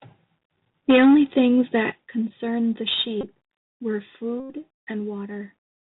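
A speech recording heard through a narrowband, gritty channel: nothing above 4 kHz comes through, a granular hiss sits under the speech throughout, and s sounds come out scratchy and smeared, with loud bright moments roughened further. This is plainly audible damage from the Bluetooth CVSD headset codec, which fits a 64 kbps CVSD link. It encodes each sample as a single up-or-down step with an adapting step size, so sharp high-frequency movement outpaces the steps and turns to distortion and grain. From 0.89 to 1.76 s the loudest syllables take on a harsh, crackling edge with flattened tops, about 7 dB beyond what the path can carry and clipping roughly a tenth of the samples. That points to microphone overload, the likely cause being an input volume set too high so the peaks slammed into the converter's ceiling. Inside that stretch, at 0.91 s, the voice and the background drop together by about 3 dB, and at 1.92 s, just after the distorted passage, they drop again by about 8 dB, each change abrupt rather than a fade. 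This is the microphone volume stepped down, most plausibly the call software reacting to the overloaded input by cutting the device's gain in a single jump each time. Later the sound briefly freezes into a steady buzz, from 3.21 to 3.24 s for 22.5 ms and again, much longer, from 4.40 to 4.52 s for 97.5 ms. These are Bluetooth headset packet repeated events. When voice packets between headset and phone were lost, the chip replayed the last good packet's bits every 3.75 ms, producing a tone near 267 Hz until valid packets resumed. The durations fit about six and twenty-six lost packets respectively.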